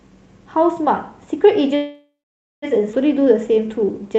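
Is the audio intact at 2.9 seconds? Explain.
No, there's a skip ahead right there, between about 2.92 and 2.96 s. Roughly seven tenths of a second of speech was thrown away, either lost in transit or dropped by the jitter buffer when it overflowed with later audio already queued. Playback lurches forward, with only a tiny 7 ms fill bridging the gap. You hear the speech jump abruptly, the two sides of the cut butted almost straight together.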